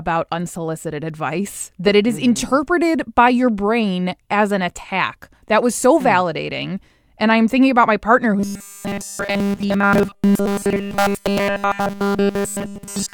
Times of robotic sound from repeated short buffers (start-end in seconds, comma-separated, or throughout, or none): 8.40-13.14